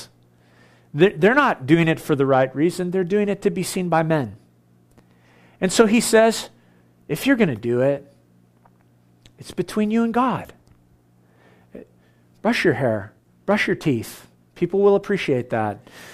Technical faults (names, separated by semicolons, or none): none